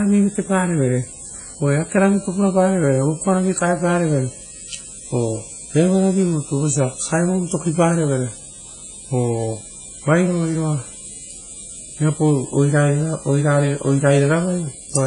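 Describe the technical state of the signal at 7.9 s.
At 7.9 s the speech carries damage that runs throughout the clip, likely from heavy WMA compression at a low bitrate around 24 kbps. Long transform blocks smear quantisation noise into a ringing, washy hiss that breathes with the signal, and nothing remains above 10.1 kHz.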